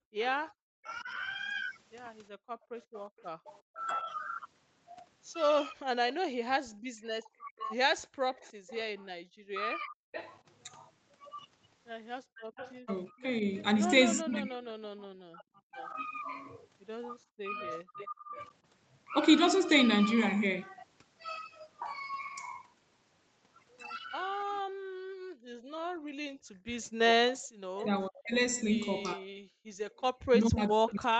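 From the start to about 10.0 s the talker keeps dipping and breaking up, roughly 2 seconds in total and by as much as about 40 dB at worst. That's speech suppressed in double talk, likely because the echo canceller couldn't tell this voice from the far end's and ducked both. From 0.88 to 3.85 s there's also an echo leak: a faint copy of the voice trailing 363 ms behind, about 30 dB down, probably speaker sound the canceller failed to fully remove. Inside that, from 2.32 to 3.21 s, the room sound drops away by about 40 dB for around half a second. That's background gated by the echo canceller clamping the mic while the loudspeaker played. A second echo leak runs from 7.58 to 18.08 s, now 425 ms late and only about 20 dB under the voice, so it's easier to catch. The background gating hits again at 8.09–8.65 s, down about 37 dB, and at 12.25–12.56 s, down about 37 dB. Double-talk suppression returns from 13.1 to 18.37 s, around a second of dips reaching about 30 dB. 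It comes back once more from 24.36 s to the end, cutting as deep as about 40 dB. The room sound gets gated once more at 26.39–26.68 s, down about 35 dB. From 26.83 s to the end the last echo leak sits just 10 dB below the voice at a 454 ms delay. All of this rides on Opus at 32 kbps, topping out at 8 kHz.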